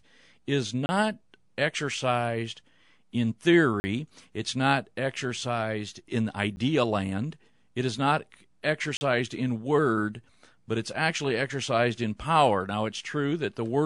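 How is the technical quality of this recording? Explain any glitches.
The speech is broken by four brief dropouts, each a block of digital silence: 0.86 to 0.89 s (30 ms), 3.80 to 3.84 s (40 ms) right after "exercised in", a 10 ms hole at 6.56 s just before "land it is not", and 8.97 to 9.01 s (40 ms) ahead of "in word but it's". Each sounds like a tick or tiny gap. The signal was zeroed with no fade, typically because an output buffer went unfilled in time.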